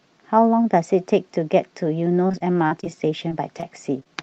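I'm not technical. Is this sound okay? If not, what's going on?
No. Between 2.27 and 2.87 seconds there is repeated packet loss (robotic sound): seven small pieces of the call went missing in quick succession. The receiver patched each hole by stretching out the sound just before it, so that stretch comes out choppy and somewhat robotic.

Later there is short concealed packet loss: tiny pieces, about two hundredths of a second each, failed to arrive, around 3.29–3.32, 3.60–3.64 and 4.00–4.09 seconds. Each was smoothed over, leaving a brief smear or wobble.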